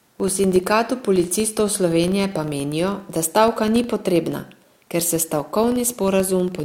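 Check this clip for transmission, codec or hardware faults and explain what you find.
A filter restarted on every block affects the whole speech clip. Each block starts from silence, adding a transient that gives a 25 Hz buzz tracking the speech level.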